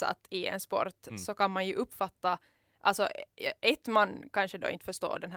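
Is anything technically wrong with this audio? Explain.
No, nothing stood out as technically wrong when listening to this speech recording.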